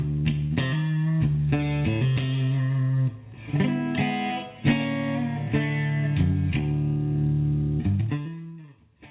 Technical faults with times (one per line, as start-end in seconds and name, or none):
0.47-0.53 short concealed packet loss
7.93-8.75 zipper noise